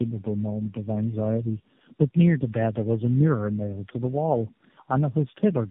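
From start to finish the speech carries tandem speech coding. It sounds like three low-bitrate speech codecs in a row, each re-encoding the previous one's already damaged output, with 64 kbit/s links between them. Nothing reaches above 3.7 kHz, so the sound is narrowband and muffled. What sets it apart from a single narrowband codec is the compounding: the roughness, dullness and watery warble are heavier than any one coder would leave.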